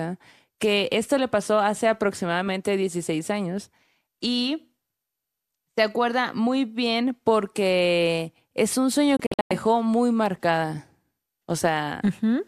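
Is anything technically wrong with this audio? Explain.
Yes. Between 9.17 and 9.51 s, just after "porque es un sueño" and before "dejó muy marcada", there is a digital broadcast dropout. The receiver stopped getting valid frames and muted until good ones returned. About 216 ms of speech is lost in several holes spread over 336 ms, the longest 96 ms, which fits roughly nine failed frames. Each gap fades out in about 3 ms to true silence, with no hiss. Unlike network packet-loss concealment, nothing is smeared or repeated to fill the gaps.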